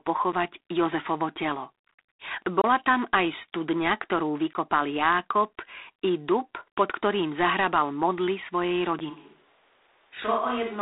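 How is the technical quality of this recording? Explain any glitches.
The technical quality is poor. Three kinds of fault are audible.

G.726 ADPCM runs throughout at 24 kbit/s. Only a few bits code each sample's prediction error, so a harsh hiss tracks the speech level. Nothing passes above 3.8 kHz.

Blocks of digital silence occur at 0.32 s, from 2.62 to 2.64 s, at 4.53 s, and at 8.99 s. The sound drops abruptly to silence and back. The two 10 ms gaps are heard as ticks, the longer ones as short holes.

A switch to a distant microphone happens at 9.12 s and lasts to the end. The likely cause is a lost close microphone. The speech turns roomy and hollow, about 5 dB quieter, with room noise roughly 35 dB down.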